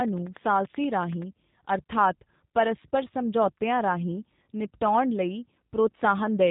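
From start to finish the speech has passed through a G.729 codec, which throws away the actual waveform and resends it as a vocal tract filter, a pitch predictor and a handful of pulses per 10 ms frame, which fits an 8 kbit/s G.729A coder. The damage is plainly audible: nothing above 4 kHz survives, so the speech sounds muffled and narrowband, with a slightly rough, buzzy, synthetic texture.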